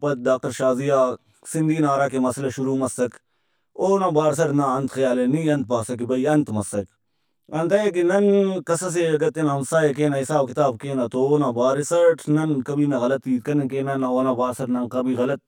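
From start to finish the speech has channel delay (comb filtering): one side runs around 20 ms behind the other, and summing to mono cancels evenly spaced frequencies starting down near 30 Hz. The result is a rough, slightly doubled sound.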